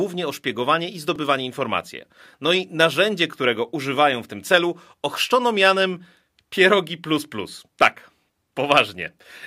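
A speech recording with one repeated buffer fault at 1.16 s. A very short slice, about 2.67 ms long and consistent with a 128-sample buffer, plays two extra times with hard joins, producing a brief click-like buzz. Essentially no audio is lost; new data simply arrived late.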